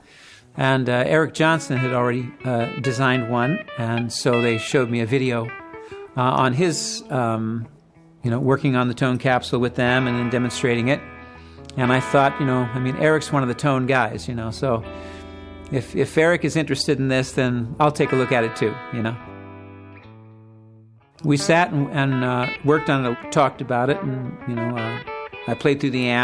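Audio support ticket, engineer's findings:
No audible faults found across the full recording; no component action needed.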